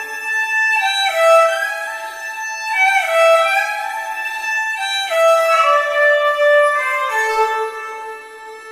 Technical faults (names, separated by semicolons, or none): none